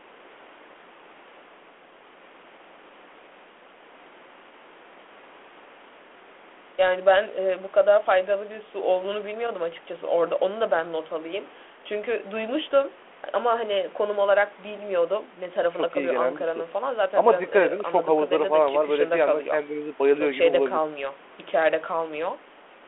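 It's a speech recording carried over a G.726 ADPCM link at 32 kbit/s in the usual telephone band of 300 Hz to 3.4 kHz, and nothing in it stands out as a technical problem.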